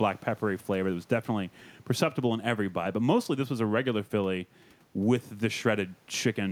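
No technical faults are audible in this recording.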